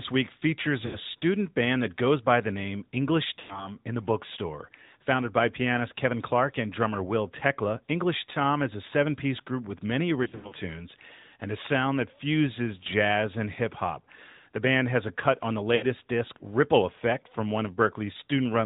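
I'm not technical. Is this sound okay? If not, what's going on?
No. The whole clip has passed through the AMR narrowband mobile codec, the old phone-network speech compressor. It cuts off everything above 4 kHz and rebuilds the speech from a simple model, so it sounds plainly muffled, buzzy and somewhat synthetic throughout.

There are also lost AMR speech frames: short stretches where chunks of the signal were garbled by radio errors and the decoder filled the gap by stretching the last good sound while fading it. This causes brief warbles or dropouts at 0.86–0.98 s, 3.40–3.73 s, 10.24–10.54 s (several small gaps spread across it) and 15.76–15.84 s, each followed by a moment of weak or rough sound.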